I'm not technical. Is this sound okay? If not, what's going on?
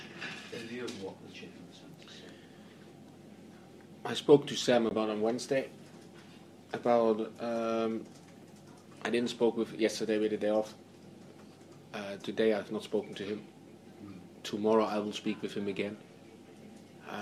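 No, there's a tiny gap at about 4.89 to 4.94 s where the sound drops out for a split second, likely a Bluetooth stall from a wireless hiccup.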